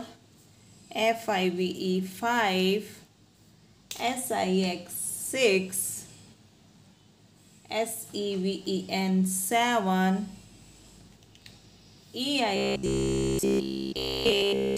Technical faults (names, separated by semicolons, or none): robotic sound from repeated short buffers